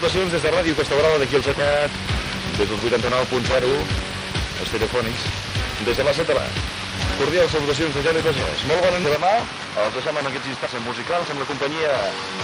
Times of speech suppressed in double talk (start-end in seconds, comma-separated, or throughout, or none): none